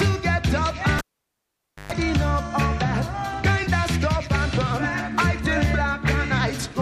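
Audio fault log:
0.99–1.92 s, cable pulled and plugged in: a pop as the lead disconnects, about 0.89 s of near silence, a 124 ms burst of 50 Hz mains buzz while only the tip touches, then a reconnection pop. Waveform: spikes flanking a flat gap. Spectrogram: broadband vertical lines, stacked 50 Hz harmonics.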